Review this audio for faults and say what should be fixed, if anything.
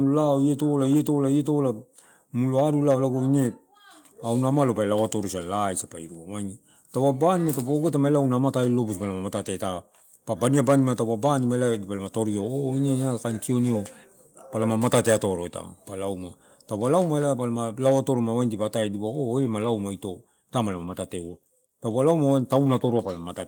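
No faults turn up in the audio, so nothing needs to be fixed.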